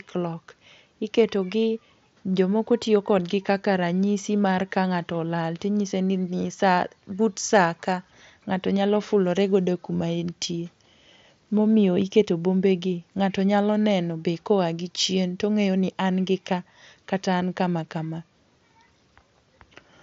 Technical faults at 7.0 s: none

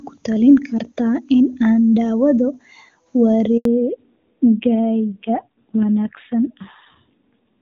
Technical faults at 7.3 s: fallback to narrowband

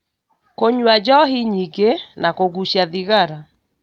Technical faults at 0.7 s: none

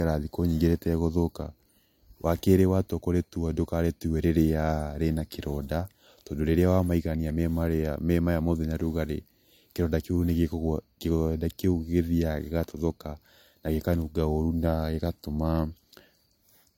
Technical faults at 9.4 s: low-bitrate audio saved at a high bitrate

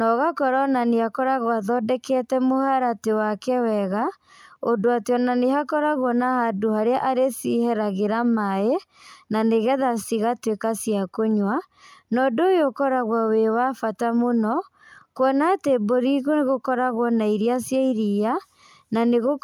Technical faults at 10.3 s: none

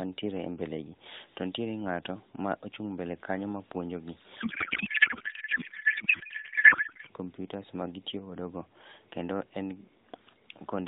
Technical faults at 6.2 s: codec payload misread

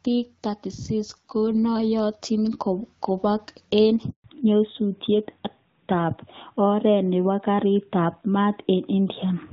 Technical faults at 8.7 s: fallback to narrowband

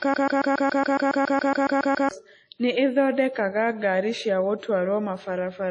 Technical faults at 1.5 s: WMA compression; broken-record loop

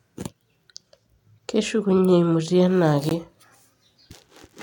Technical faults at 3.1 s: Bluetooth stall

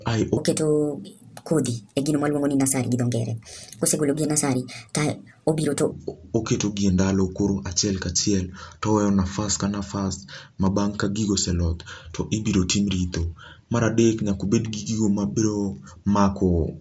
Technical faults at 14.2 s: none

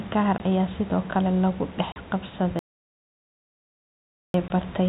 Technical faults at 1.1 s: none

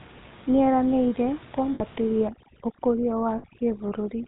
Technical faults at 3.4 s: GSM full-rate codec; overdone noise removal; lost GSM frames

